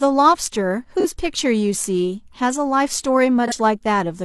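At 1.00 s and again at 3.47 s, the speech has a brief smeared, noisy patch of about 43 ms, which fits a single lost AAC frame each time. This is AAC frame loss with concealment: with the frame's data missing, the decoder rebuilt the gap from the previous good spectrum, reusing its energy with scrambled phase. The loss is short enough that the gap is papered over rather than faded to silence.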